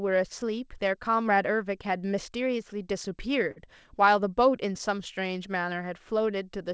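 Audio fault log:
throughout: clock drift between sender and receiver. The sender's audio clock runs roughly 3% slower than the receiver's, so samples arrive a little more slowly than they are played out and the jitter buffer keeps draining. The receiver has to keep padding the stream to stay in step, which leaves small, unevenly spaced timing hiccups and a slightly unsteady pace across the whole clip.
0.16–3.10 s and 5.28–6.58 s: repeated timing corrections. To cover the slow sender, the receiver repeatedly stretches short pieces of the speech, playing these stretches at about 97% speed. It adds roughly a tenth of a second in the first run and about half that in the second. Every edit lengthens the audio and none shortens it. They come at irregular intervals, so they sound like faint stutters and a slightly dragging rhythm.
3.51–3.58 s: short stall from a late packet. A packet arrived after its playout time and the jitter buffer ran empty. 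The receiver held the last sound for 48 ms until the packet turned up, then carried on from the same point, so no speech is lost. The held sound has a brief buzzy or dipped quality, and playback runs 48 ms later from then on. The G.722 call path at 64 kbps contributes its ordinary coding noise and nothing above 8 kHz.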